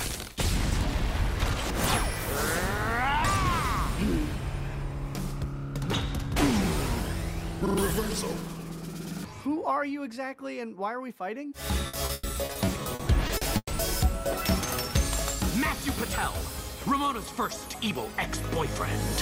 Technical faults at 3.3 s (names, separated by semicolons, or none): none